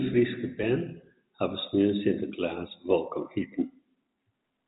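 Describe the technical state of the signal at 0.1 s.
At 0.1 s the signal is intact, with no fault present, and shows only the narrow band of G.711 telephone coding, with nothing above 3.8 kHz.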